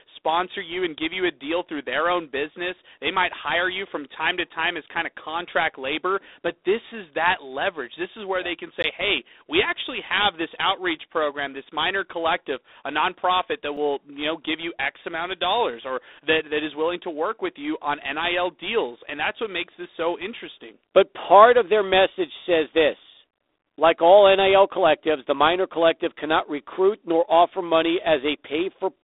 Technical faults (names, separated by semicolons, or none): G.726 ADPCM; block of digital silence